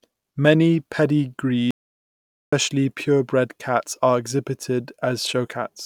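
At 1.71 s the speech just cuts off dead and stays out until 2.53 s, so roughly 0.82 s vanishes. It's an audio dropout to silence: the gap is plain silence with no room tone underneath, which most likely means the input dropped away while the recorder kept writing silence. The speech then comes back abruptly, mid-flow, on "purebred cats are", and whatever was said during that gap is gone.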